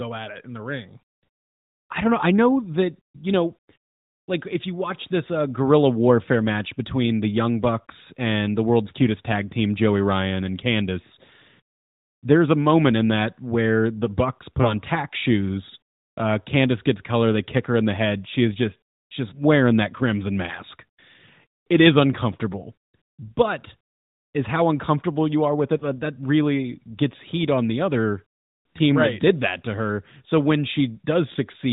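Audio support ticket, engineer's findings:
Lost AMR speech frames at 14.62–14.74 s, 19.30–19.41 s, 25.78–25.83 s: brief dips and warbles, consistent with single corrupted frames concealed by repeating prior pitch and vocal tract parameters at decaying gain. Narrowband band-limit below 4 kHz audible throughout.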